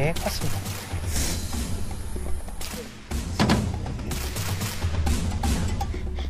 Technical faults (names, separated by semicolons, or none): compressed frames skipped